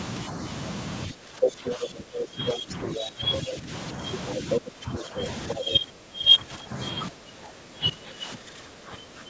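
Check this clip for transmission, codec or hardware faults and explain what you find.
Two related faults run through most of this speech clip. The talker keeps being pushed down, and a second voice breaks in. Both point to an echo canceller struggling with double talk on a call. The top of the band stops near 8 kHz, as expected from the call's microphone processing.

Speech suppressed in double talk, from 1.07 to 3.69 s, 4.43 to 5.20 s, 5.55 to 6.77 s and 7.09 s to the end. The talker's level sinks and pumps in patches, dropping by about 15 dB and by about 20 dB in the 5.55 s stretch, so the voice sounds broken. The likely cause is the canceller failing to tell the local voice from loudspeaker echo while both sides spoke, and attenuating everything together.

Other side's voice leaking through, from 1.42 to 1.77 s, 2.47 to 3.39 s, 4.27 to 4.60 s and 4.93 to 5.77 s. A second voice surfaces in short bursts. 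In the 2.47 s and 4.93 s stretches it sits at roughly the same level as the talker. It is likely residual loudspeaker echo that the canceller did not fully remove from the microphone signal. It overlaps the suppressed passages.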